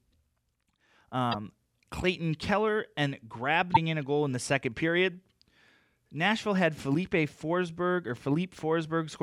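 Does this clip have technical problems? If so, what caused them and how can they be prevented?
Yes, there's damaged data in the compressed stream, heard as short blips at 1.29–1.35 s and 3.70–3.77 s, where the decoder hits corrupted frames and loses sync while hunting for the next frame header. Verifying transfers with checksums and re-fetching from a clean source prevents it.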